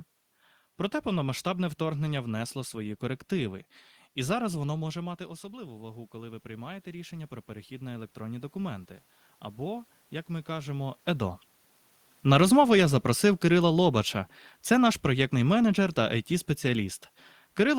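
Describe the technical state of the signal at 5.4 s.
At 5.4 s the automatic gain control is rising, from 4.92 to 8.94 s. The input dropped about 14 dB when the talker moved, shortly before. The gain climbs slowly by about 8 dB. Voice and room noise swell together.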